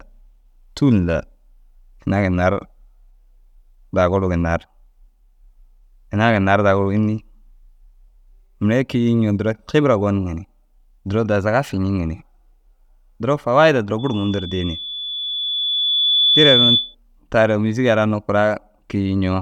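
At 13.98 s a loudspeaker feedback squeal takes hold: a pure tone near 3.5 kHz swells over roughly two seconds to sit about 5 dB above the speech. The microphone is re-amplifying the loudspeaker, with loop gain above unity at that frequency, until the tone stops at 16.95 s.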